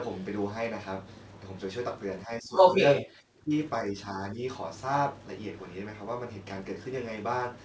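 The speech dips sharply from 2.26 to 2.81 s and 3.06 to 3.51 s (about 15 dB), and more gently from 3.85 to 4.43 s, likely speech suppressed in double talk by the echo canceller.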